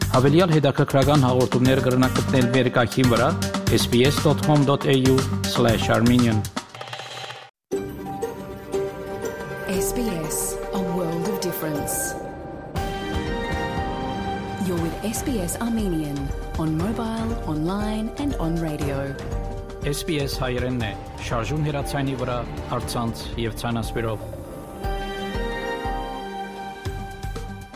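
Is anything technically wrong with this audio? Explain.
No, nothing is technically wrong with this audio.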